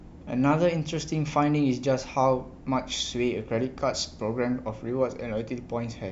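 Speech, with no technical faults to report.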